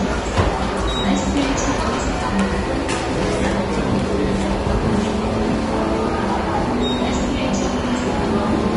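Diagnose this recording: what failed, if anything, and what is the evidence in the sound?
The failure sits at the codec stage: throughout, the audio sounds hissy and grainy, with roughened tones and smeared attacks, and nothing exists above 10.6 kHz. On a spectrogram the treble ends in a flat ceiling, with speckled noise below it. This points to likely Vorbis compression at a low bitrate near 32 kbps, where coarse quantisation replaces fine detail with noise.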